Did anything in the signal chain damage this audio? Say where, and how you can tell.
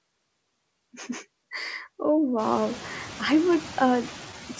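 Yes. Call processing: noise suppressor artifacts throughout, with background noise pulled down by about 20 dB between phrases, the artifacts most audible after the room noise rises near 2.5 s.

Buffer stage: clock drift between sender and receiver, with the sender's clock running roughly 1.5% slow, so the jitter buffer keeps draining and needs continual compensation.

Buffer stage again: repeated timing corrections from 0.02 to 3.56 s, playback running at 99% speed and stretching in roughly 50 ms overall, through small, unevenly spaced edits.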